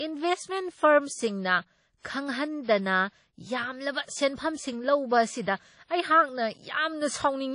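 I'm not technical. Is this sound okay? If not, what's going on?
No. Throughout the speech there is plainly audible compression damage, most likely from WMA compression squeezed to a low data rate. Nothing reaches above about 10.1 kHz, so the crisp top end of consonants like s and t is missing. The encoder works in chunks of sound, so its errors smear over short stretches: syllables ring, and a hiss swells and fades with the voice.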